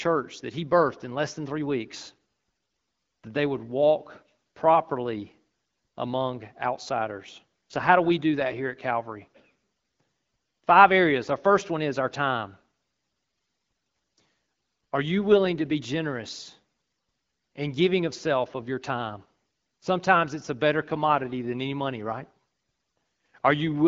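The clip is speech carried over an AMR wideband (HD Voice) codec at 12.65 kbit/s, and nothing in it is technically wrong.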